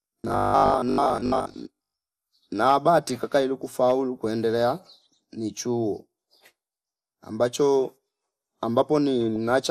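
A speech recording of under 10 s carries dull, granular, gurgling distortion throughout, with upper bands flickering in and out. This is most likely MP2 compression at a low bitrate, around 80 kbps. On a spectrogram the top end looks ragged, with blocky sub-band patches appearing and vanishing. From 0.02 to 1.94 s the voice turns into a rigid, metallic buzz that still roughly follows the words. The likely cause is robotic sound from repeated short buffers, with about half the audio replaced by repeats of the last 20 ms. That forces a 50 Hz buzz, visible as evenly spaced vertical stripes on the spectrogram and a strictly periodic waveform. From 9.28 to 9.36 s there is a brief burst of burbling, which is DAB burbling. Bit errors, at a rate of a small fraction of a percent, corrupt samples and scale factors, so single sub-bands jump in level frame by frame. On a spectrogram this shows as isolated bright rectangular blotches.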